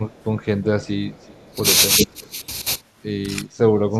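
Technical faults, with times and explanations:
0.1–1.56 s, 1.98–2.07 s and 3.92–3.99 s, echo leak: a delayed copy of the speech trails the original by roughly 0.38 s (375 to 387 ms). It sits far below the direct speech in the first and last stretches, about 30 dB down, but briefly matches the speech in level around 2 s. This is likely a far-end loudspeaker path that the echo canceller did not fully remove, so residual echo was sent back into the call.
0.11–0.15 s, 0.93–1.05 s, 1.49–1.57 s, 1.99–2.42 s and 3.43–3.71 s, speech suppressed in double talk: the main speech dips in level while both sides talk at once. The first three dips are short, about 10 dB deep. At 1.99–2.42 s the dip is longer and reaches about 20 dB, and at 3.43–3.71 s it reaches about 25 dB. The canceller likely could not separate the talker from the echo during overlap and attenuated both.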